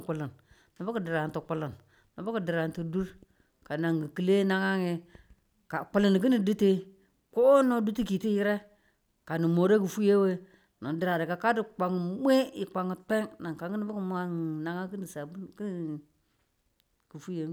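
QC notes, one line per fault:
Nothing stood out on listening to the speech in this recording.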